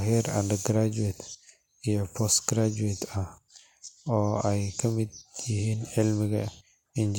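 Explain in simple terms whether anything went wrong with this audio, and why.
Nothing went wrong here.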